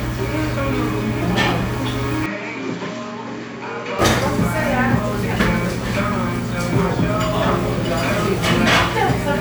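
At 2.26 s the sound abruptly turns dull and boxy, with no gap at the change. Nothing above 7.6 kHz remains, and the level drops by roughly 10 dB. A faint new background noise appears, far below the sound itself. At 3.99 s the full brightness and level return. This is most likely an input switched to a poorer device mid-recording, with a narrower-band microphone briefly taking over and bringing its own tone, level and noise.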